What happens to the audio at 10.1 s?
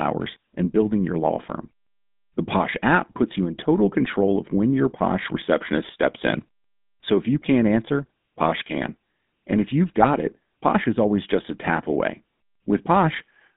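Just before 10.1 s, from 10.0 to 10.09 s, there is a burst of GSM bit errors. Flipped bits, around 1.4% of them, reach the decoder and corrupt its filter, pitch and gain values, which fits about three 20 ms frames. The speech turns into squawks, pops and gargling. Unlike a dropout, the sound is distorted rather than silenced. Throughout, including here, the GSM full-rate codec's buzzy, gravelly roughness and its roughly 150 Hz to 3.7 kHz band are plainly audible.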